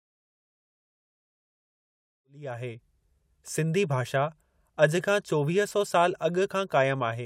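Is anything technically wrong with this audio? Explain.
No, nothing's technically wrong here; the speech just eases in with a gentle, smooth fade that starts around the two-second mark and reaches full level by about 2.9 s, with no click or hard edge.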